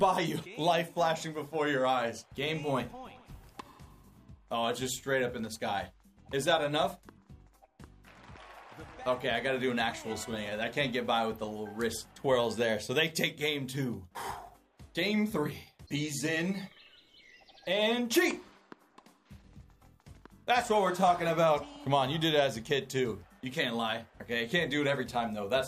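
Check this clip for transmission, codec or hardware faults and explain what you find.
No transmission, codec or hardware faults are audible; the signal stays continuous and stable throughout, with no disturbances from the path that carried or recorded it.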